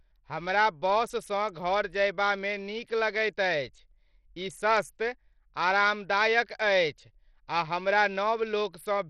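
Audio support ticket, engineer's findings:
Heavy gritty grain on the speech, start to end. Treble flickers and drops in and out even though content reaches up to 20.6 kHz. Likely Bluetooth SBC compression at a starved bit pool, roughly what you'd expect near 64 kbps. Top sub-bands get few or zero bits, the rest are coarsely quantised, so you hear the noise and aliasing.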